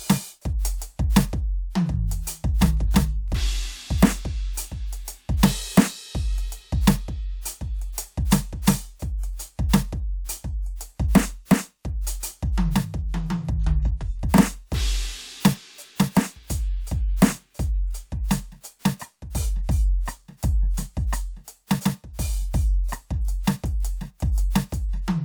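Music, with no audible faults.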